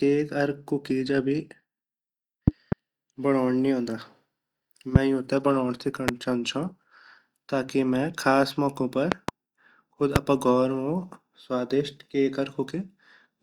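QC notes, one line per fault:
2.48–2.75 s, loud pop: Two sharp pops, about 20 dB above the speech. Likely a voltage pulse from a plug or switch.
4.96–4.98 s, loud pop: One pop, about 25 dB up. Likely a static discharge.
6.08–6.11 s, loud pop: One pop, about 20 dB up. Likely a driver glitch.
9.12–9.31 s, loud pop: Two pops, about 25 dB up. Likely a switching pulse.
10.16–10.18 s, loud pop: One pop, about 25 dB up. Likely a voltage step. Speech continues underneath each pop.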